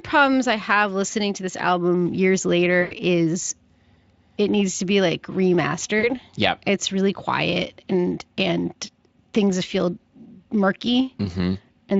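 Speech here, carried over a Speex link that sounds only lightly worn, but there are three spots of VoIP packet loss concealed by the speech codec: 1.07–1.10 s, 2.81–2.94 s and 5.99–6.14 s. Each time, the decoder loses incoming audio and keeps guessing from the last pitch and filter it had, so the sound smears into a buzzy tone or a coloured noise that fades and stays weak for a beat after data returns. The middle one loses the most and fits roughly 100 ms of missing audio. The others suggest about 20 and 40 ms.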